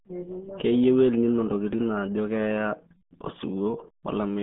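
Speech, with heavy RealAudio 14.4 codec damage from start to finish. Nothing survives above about 3.7 kHz, and the low end thins out below roughly 150 Hz, leaving a narrow telephone-like band. The voice sounds muffled and gargly. This is a low-rate speech codec modelling the signal crudely, and the damage fits an 8 kbit/s stream built for dial-up modems.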